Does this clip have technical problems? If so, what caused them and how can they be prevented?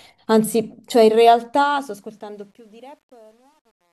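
Yes, there's truncation distortion on the fade-out. From 1.6 s to the end at 3.93 s the quiet tail goes gritty. It's worst from 2.5 s onward. That's the fade stage keeping too few bits with no dither, so the waveform collapses into a few square steps, consistent with something like 10-bit resolution. Keep fades at full bit depth and add dither whenever you reduce the word length.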